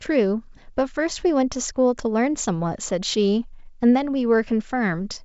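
No technical faults are audible.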